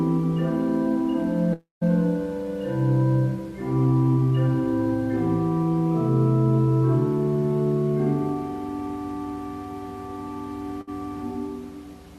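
A long network dropout likely cut the stream from 1.53 to 1.83 s: no audio arrived for about 280 ms, so the receiver stretched the last sound into a fading buzz or hiss that dies to roughly 160 ms of silence before the audio resumes further on with that stretch gone. At 10.81 to 10.89 s a burst of packet loss removed about 60 ms, and the receiver held and faded the preceding sound across the gap before playback picked up past the lost part.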